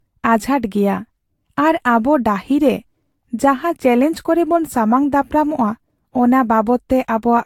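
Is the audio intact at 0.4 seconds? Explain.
No. Generation loss covers the whole clip, including 0.4 s. It sounds swirly, hollow and smeared, with blurred attacks and nothing above 18.8 kHz. The likely cause is about five lossy re-encodes, each at a rate near 68 kbit/s. Each pass adds fresh quantisation damage.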